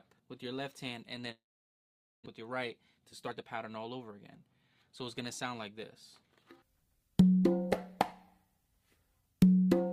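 Long network dropout at 1.31 to 2.28 s: the sound stalls and the last moment is stretched into a fading buzz, which within about a tenth of a second gives way to about 850 ms of near-silence. When the audio resumes, roughly 600 ms of it is simply gone. The likely cause is a run of packets that never arrived, with the receiver's concealment papering over the gap and its playout delay shifting by around 300 ms. Jitter buffer speed-up at 2.98 to 4.64 s, and again at 5.22 to 5.78 s: after the backlog, the receiver trims tiny pitch-period slices over and over to shrink its queue. The audio plays about 14% fast in the first stretch, losing around 300 ms in total, then about 6% fast in the second, losing roughly 40 ms. Pitch stays the same, so the effect is a hurried, slightly compressed pace rather than a higher tone.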